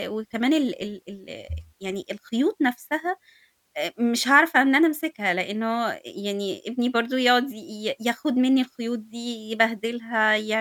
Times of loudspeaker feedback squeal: none

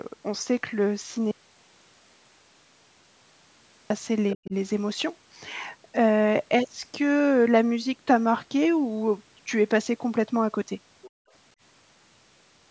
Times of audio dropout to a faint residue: 1.31-3.90

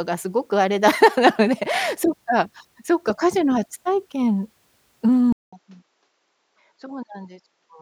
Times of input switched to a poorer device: 5.32-7.82

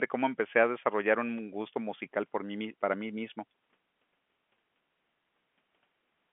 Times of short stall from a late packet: none

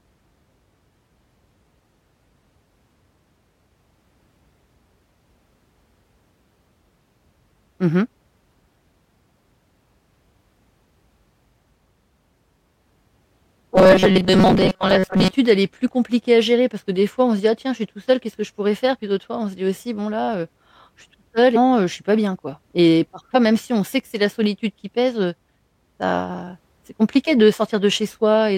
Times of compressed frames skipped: 21.55, 23.34

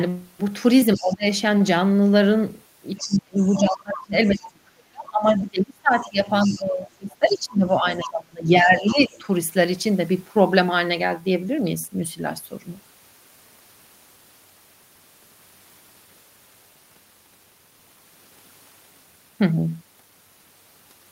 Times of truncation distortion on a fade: none

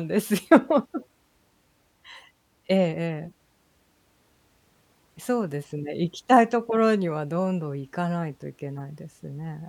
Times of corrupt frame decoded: 0.99, 3.25-3.31, 5.03, 8.78

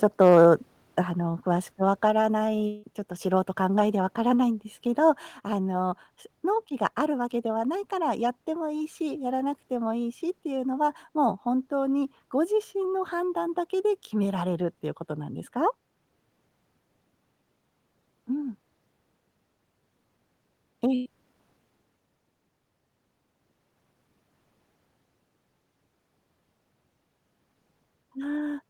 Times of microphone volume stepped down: 1.02, 2.10, 4.14

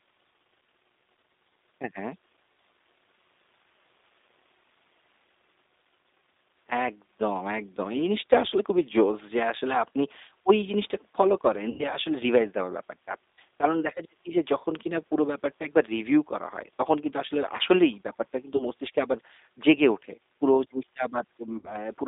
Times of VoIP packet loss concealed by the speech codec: 11.70-11.84, 18.56-18.65, 21.58-21.72

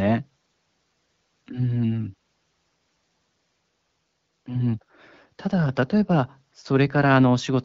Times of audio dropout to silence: none

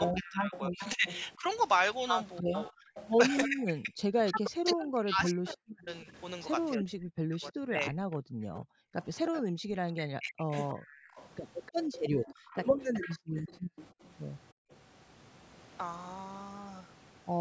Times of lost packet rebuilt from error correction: none

